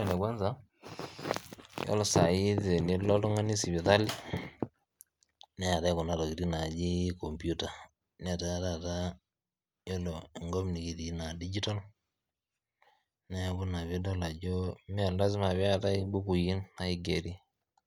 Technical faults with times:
none

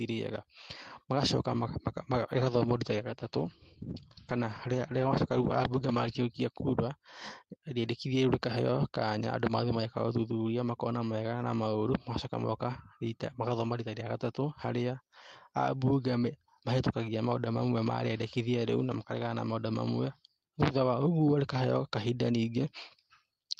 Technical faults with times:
2.34-6.37 call bitrate drop

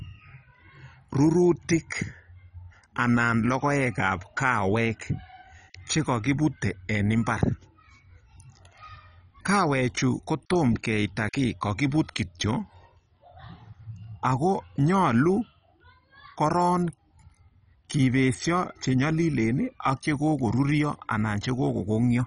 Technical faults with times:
0.00-22.26 MP2 compression

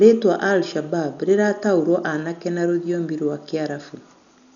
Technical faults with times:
0.00-4.55 Dolby Digital compression

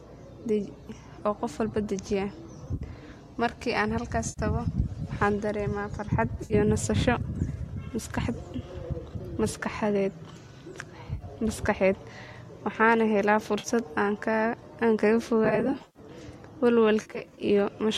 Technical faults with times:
2.65-2.83 AAC frame loss with concealment
4.29-4.41 AAC frame loss with concealment
6.45-6.54 AAC frame loss with concealment
11.13-11.22 AAC frame loss with concealment
13.59-13.68 AAC frame loss with concealment
15.45-15.99 AAC frame loss with concealment
17.02-17.43 AAC frame loss with concealment

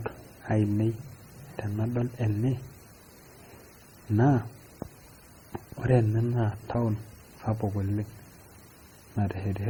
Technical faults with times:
0.00-9.70 transcoding between lossy codecs

